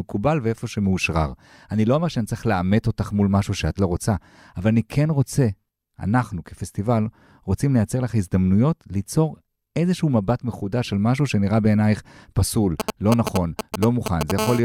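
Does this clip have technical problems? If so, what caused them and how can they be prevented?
Yes. From 12.80 to 14.32 s, GSM signalling bursts from a nearby 2G phone give a galloping pattern of short 217 Hz buzzes, roughly as loud as the speech. Keep phones away from the recording chain.

From 14.39 to 14.60 s, GSM phone buzz, a raspy 217 Hz tone about 4 dB below the speech, comes from an active call being rectified. Use RF-filtered, shielded cabling.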